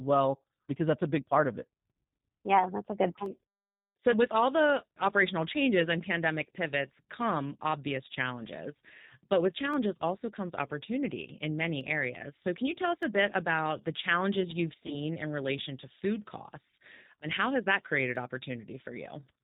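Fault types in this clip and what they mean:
G.729 codec: Throughout, the speech is limited below 4 kHz and sounds slightly rough and synthetic, as an 8 kbit/s model-based coder would make it. Unlike a simple low-pass filter, the coder rebuilds each 10 ms frame, adding a rough, artificial grain.
dropped samples: Sharp single clicks at 3.26, 9.74, 11.81, 13.03 and 18.16 s, the first just after "yeah that's a good". Each is likely a loss of a fraction of a millisecond. That is too short to remove any sound, which distinguishes it from a gap or dropout.
VoIP packet loss concealed by the speech codec: After "about the challenges you've", at 14.86 to 14.96 s, about 20 ms of audio was lost. The decoder fills it with a fading extension of the last sound, and the voice stays weak or distorted until "in relation to food". A click from dropped samples would not last this long.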